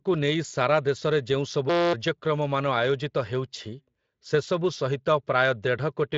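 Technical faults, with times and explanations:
1.70 to 1.93 s, system hang loop: the speech cuts out and a steady buzz at 172 Hz takes its place, because the sound hardware kept replaying one 5.8 ms slice, which fits a 256-sample buffer, about 41 times while the system stalled. Roughly a fifth of a second of audio is lost. The waveform shows one identical short cycle repeated edge to edge, and the spectrogram shows evenly spaced harmonic lines at multiples of 172 Hz.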